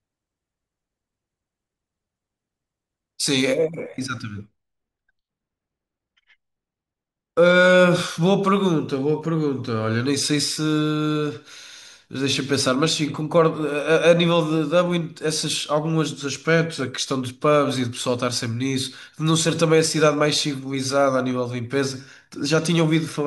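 From about 3.58 s through to the end, the speech goes dull and muffled, a clear case of de-emphasis applied wrongly. Someone ran a treble-cut filter meant to reverse pre-emphasis, but this audio either never had that boost or got the cut a second time. You can hear the top end roll off gently and steadily, landing at about 8 dB down at 10 kHz relative to 1 kHz, so consonants lose their edge and everything sounds veiled.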